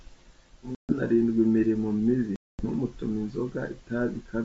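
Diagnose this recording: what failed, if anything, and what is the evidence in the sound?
Network-stage packet loss on an ADPCM call: hard-edged silent holes at 0.75 to 0.93 s (about 140 ms) and 2.36 to 2.66 s (230 ms), suggesting roughly fifteen and twenty lost packets. Unlike a plain dropout, the speech resumes slightly distorted while the decoder's predictor and step size resynchronise, under otherwise clean G.722 wideband audio.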